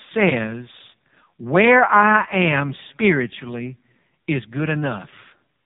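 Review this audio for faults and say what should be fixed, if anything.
AMR narrowband mobile codec damage runs throughout. Nothing passes above about 3.8 kHz, and the speech sounds buzzy and synthetic, pointing to a low mode near 5.15 kbps. Record or transfer over a wideband path, not a narrowband mobile call.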